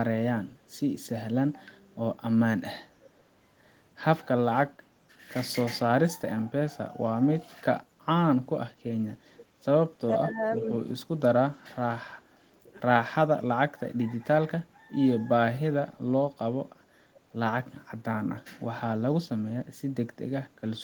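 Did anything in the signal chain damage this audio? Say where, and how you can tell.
Yes. Call processing left echo leak at 3.01 to 3.09 s and 9.37 to 9.46 s. Faint, short copies of the speech return about 481 ms and 509 ms later, well below the main level. A far-end loudspeaker echo canceller likely failed to remove them fully.

Speech suppressed in double talk appears from 10.16 to 10.79 s. The speech dips in pieces, about 10 dB at its deepest, over roughly half a second. The echo canceller likely mistook overlapping talk for echo and attenuated both.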